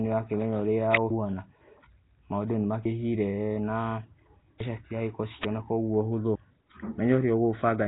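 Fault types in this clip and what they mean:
Nellymoser compression: Through the whole speech clip the sound has a rough, hissy halo and a smeared, underwater quality, with nothing at all above about 3.8 kHz and heavy damage. This is likely Nellymoser Asao, the old Flash microphone codec, at around 16 kbps. It codes short blocks at a fixed, small number of bits per sample, so weak bands get no bits and are filled with noise, which gives that grainy wash over the speech.
Electrical switching spike: At 0.95 s and 5.44 s a sharp snap cuts across the speech, lasting about 4 and 11 milliseconds and sitting on top of the sound rather than replacing it. This is likely an electrical switching spike, where a nearby switch, motor or static discharge arcs briefly and the audio line picks up that burst of energy. The result is a hard, very short transient with no link to the speech.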